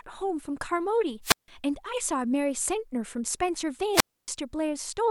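At 1.22 s the speech gives way to a brief surge of hiss, then drops into near silence for about 0.16 s before returning at 1.48 s. The same pattern recurs from 3.92 to 4.28 s, with a longer hole of about 0.28 s. Both are wireless microphone squelch dropouts: the analogue FM radio link faded, and the receiver's squelch muted its output until the signal recovered.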